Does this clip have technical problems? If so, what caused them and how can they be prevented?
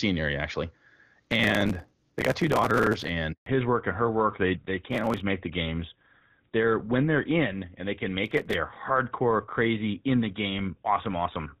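Yes, there are three kinds of problem in this speech clip.

Processor overload crackle shows up first from 1.23 to 3.09 s, right after "area actually," then in two shorter bursts at 4.91 to 5.20 s and 8.24 to 8.55 s. The processor kept missing the deadlines for its tiny audio buffers, which sound well under a millisecond long. Each missed buffer was simply skipped, leaving a hard-edged hole. Hundreds of these in the first burst and a few dozen in each later one add up to a gritty tearing over the voice. To prevent it, use a larger buffer or take load off the processor so it can keep up.

The handover gap runs from 3.32 to 3.46 s, about 140 ms of silence. The phone was switching the call between networks, and no speech came through until the new link was up, so whatever was said in that stretch is gone. To prevent it, keep the handset where one network covers it well, so it isn't pushed into a switch mid-call.

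The fallback to narrowband happens right after that gap, at 3.46 s, and lasts to the end. Before it, the HD Voice path was clear and full. After it, nothing above 4 kHz remains, so the voice turns dull and rougher. That points to the call dropping to an older codec such as GSM full rate. To prevent it, make sure both ends and the network along the way support HD Voice throughout the call.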